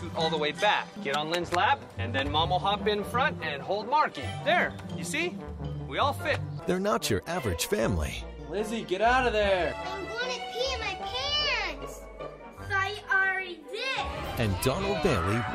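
No technical faults can be heard anywhere in the recording; the signal stays steady and intact throughout.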